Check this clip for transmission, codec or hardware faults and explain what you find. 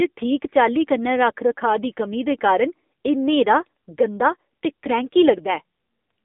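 The speech carries one fault from start to end: AMR narrowband mobile codec damage. Nothing above 3.6 kHz survives, and the band starts near 250 Hz. The codec rebuilds speech from a vocal-tract model at a low bitrate, near 8 kbps, so it sounds plainly buzzy and synthetic.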